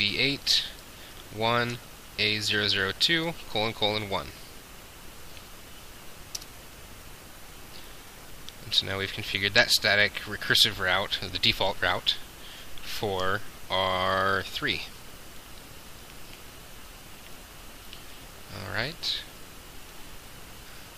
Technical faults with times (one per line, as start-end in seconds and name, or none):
none